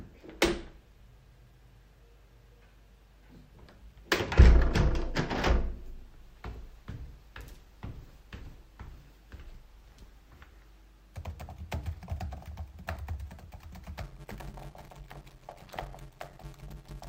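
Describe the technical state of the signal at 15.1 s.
At 15.1 s a block size mismatch (padded) runs from 14.01 s to the end. Zero-filled gaps in each 512-sample block create a 93.8 Hz buzz and 0.625× speed at normal pitch. These appear as regular waveform dropouts and spectrogram stripes.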